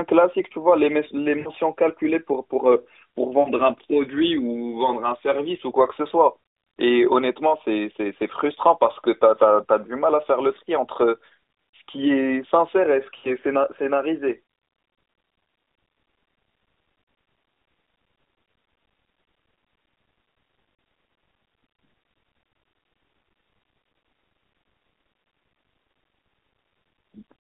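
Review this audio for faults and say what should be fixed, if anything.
Brief drawn-out, fading dips at 1.40–1.50 s, 3.40–3.50 s and 13.18–13.30 s, each fitting three 20 ms frames, and a single-frame warble at 17.04 s. These are lost AMR speech frames: the decoder stretched the last good pitch and vocal-tract settings with falling gain through the narrowband line, which runs about 250 Hz to 3.7 kHz. Stronger channel error protection or better radio coverage would keep frames from failing their checksum.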